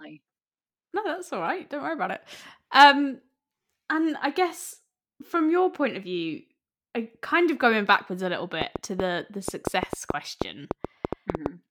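From 8.62 s to 11.47 s, just after "going backwards a little", a train of clicks runs over the speech: around fifteen sharp pulses at an average of about 5.3 per second, spaced unevenly and reaching roughly 15 dB above the speech. They sound like a ragged ticking that carries through the pauses too. The likely cause is electrical interference or a faulty connection or power supply injecting pulses. On a waveform they appear as tall, narrow spikes; on a spectrogram, as thin vertical broadband lines.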